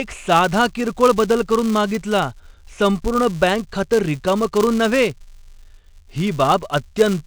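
Filter restarted on every block, throughout the speech: a steady 200 Hz buzz rides under the sound. The filter drops its memory at each block boundary and starts again from silence, so every block begins with a small transient. The boundaries fall every 5 ms, and the buzz rises and falls with the speech level.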